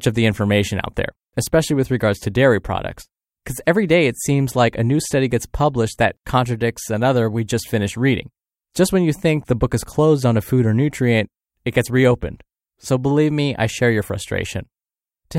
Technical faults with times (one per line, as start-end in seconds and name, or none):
none